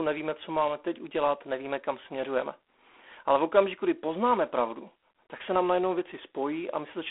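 Speech runs through G.726 ADPCM coding for its whole length, with a harsh, rasping hiss that rises and falls with the speech level, which fits the 24 kbit/s mode. A spectrogram shows a 250 Hz to 3.4 kHz telephone band, nothing above 3.8 kHz, and grainy noise filling the voiced regions.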